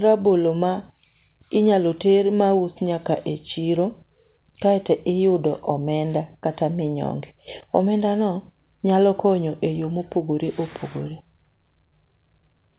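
Nothing in this speech stands out as a fault, since it has simply come through an ordinary call path, where the G.711 A-law codec at 64 kbps gives it that familiar narrowband telephone character with nothing above 4 kHz and the usual coding noise.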